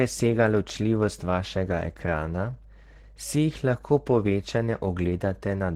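Throughout the speech there is plainly audible Opus compression damage. The voice sounds muffled and hoarse, with grainy, noise-filled upper bands. This is likely the encoder's hybrid speech mode at a low rate near 16 kbps. A spectrogram shows smeared, noisy high-frequency texture where clean harmonics should be.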